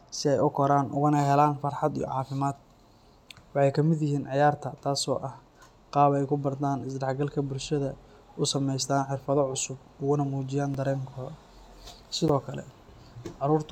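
At 10.74 s, just after "xirfado cusub ugana mujiyaan", and again at 12.28 s, the speech drops into a block of digital silence: about 3 ms the first time, about 11 ms the second, which fits a 512-sample buffer left unfilled in time. Each cut is heard as a tick or dip. Unlike a fade-out or concealed packet loss, the signal cuts out and back with no taper.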